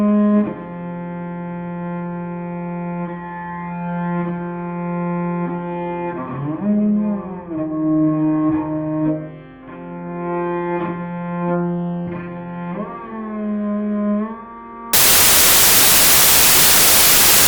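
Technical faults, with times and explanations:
14.93–17.47 s, samples built from the wrong bytes: from this point to the end of the clip the sound collapses into loud, harsh broadband noise. The bytes making up each sample are being combined incorrectly, misaligned by a byte or taken in the wrong order, so the rapidly fluctuating low-order bits land in the most significant position. Each sample value becomes essentially random, giving broadband noise at high level.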